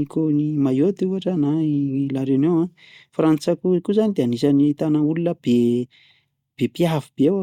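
A speech recording with nothing technically wrong in it.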